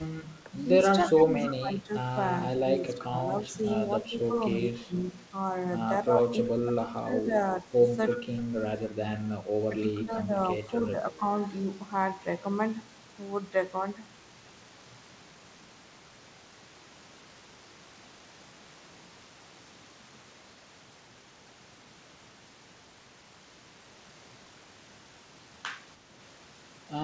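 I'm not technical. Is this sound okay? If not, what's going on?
No, not quite. The voice keeps dipping and partly cutting out, at 0.43 to 0.52, 1.09 to 3.23, 4.03 to 4.94, 6.07 to 7.66 and 9.69 to 11.24 seconds. That's speech suppressed in double talk, likely because both people talked at once and the call's echo cancelling turned this voice down too.

There's also a brief echo leak around 8.09 to 8.18 seconds, a faint repeat of the voice coming back about 0.3 seconds late. The likely cause is someone on a speakerphone whose echo cancelling didn't fully catch its own loudspeaker sound.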